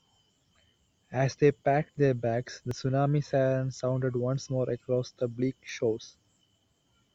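At 2.71 s and again at 5.69 s the speech skips forward: a tiny slice, around 20 ms, is gone and the sound on either side is butted together with no gap. The spacing, about 3 s apart, points to audio missing between chunks, likely a recorder or processor losing a moment each time it hands over from one 3 s block to the next. On a waveform each appears as an abrupt discontinuity; on a spectrogram, a thin vertical seam where harmonics jump.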